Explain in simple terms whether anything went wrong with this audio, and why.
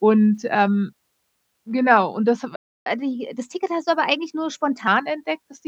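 After "genau und das hab", at 2.56 s, the speech cuts out for 0.3 s. That is a playback stall, likely because the player ran short of data.

From 2.86 to 4.87 s there is catch-up at higher speed. The speech runs 1.15 times faster and roughly two semitones higher while the player recovers the lost time, then returns to normal.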